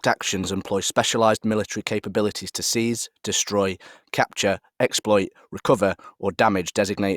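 No technical faults are audible.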